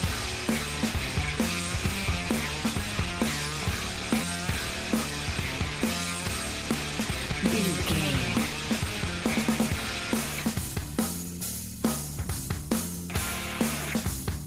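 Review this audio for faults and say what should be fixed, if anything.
At 4.21 to 4.23 s there is a skip ahead: about a second of audio was discarded, on the way or by an overflowing jitter buffer, while later audio was already queued. Playback jumps straight forward with no filler, so that stretch is simply gone.

From 4.60 to 7.44 s and again from 9.76 to 13.08 s there is jitter buffer speed-up. The buffer held more audio than its target, so the receiver repeatedly cut out short pitch-period pieces, roughly 0.2 s in total in each stretch. The sound runs about 7% and 6% fast at unchanged pitch, and feels hurried.

Both faults should be prevented by stabilising network delay and sizing the jitter buffer to absorb bursts, so late packets neither overflow it nor force catch-up trimming.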